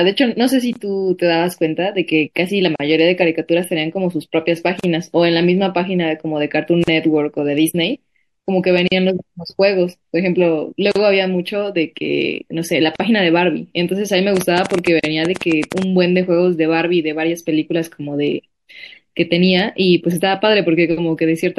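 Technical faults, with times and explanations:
Throughout, MP3 compression: the speech sounds watery and swirly, with dull treble, metallic chirps on s sounds and smeared attacks. This is likely heavy MP3 encoding, which fits about 64 kbps, cutting the top band and switching weak frequency lines on and off between frames.
0.73, 2.76, 4.80, 8.88, 10.92, 12.96 and 15.00 s, gap at a join of encoded pieces: brief abrupt dropouts, 23 ms at the first and 40 ms at the rest, mostly 2 s apart. Separately encoded pieces were joined untrimmed, leaving encoder start delay and end padding as silence before the speech carries on.
14.37 to 15.83 s, train of clicks: a burst of roughly fifteen similar sharp ticks, about 11 per second at an uneven pace, standing well above the speech. Something is injecting repeated pulses, likely interference from nearby equipment or a faulty connection or power supply.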